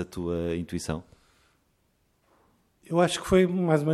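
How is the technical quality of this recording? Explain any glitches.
Nothing in this recording stood out as a problem on listening.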